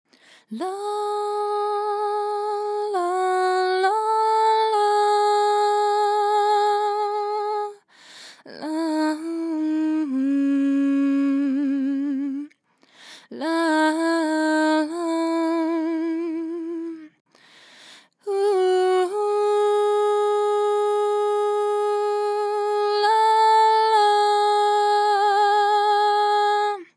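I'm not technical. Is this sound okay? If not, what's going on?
Yes, nothing stood out as a problem when listening to this sound.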